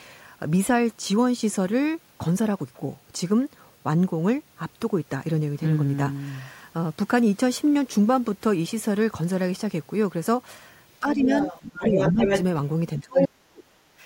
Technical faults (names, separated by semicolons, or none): speech suppressed in double talk; other side's voice leaking through